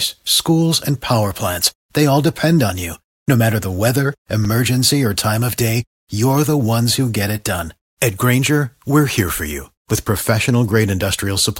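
A block of digital silence at 4.45 s, between "matter the weather" and "or time of day", cuts this speech clip out for about 5.8 ms, which fits a 256-sample buffer. Being so short, it comes across as a tick or dip. The zeros come from an output buffer left unfilled in time or from a calculation yielding invalid numbers.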